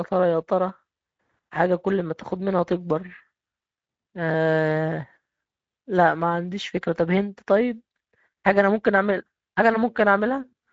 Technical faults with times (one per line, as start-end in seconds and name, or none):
0.00-10.73 Speex codec